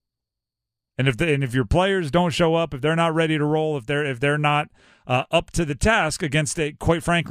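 No technical faults occur at any point in the speech.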